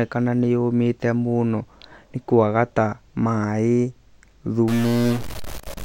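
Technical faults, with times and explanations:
4.68 s to the end: stuck bit. From here the speech turns harsh and buzzy, and the gaps between syllables fill with a gritty noise instead of dropping to quiet. That's likely one data bit jammed at a fixed value, so about half the samples land off by a step of roughly -25 dBFS, in a pattern that follows the waveform. Near silence the error flips with the sign of tiny values, which is why the pauses fizz.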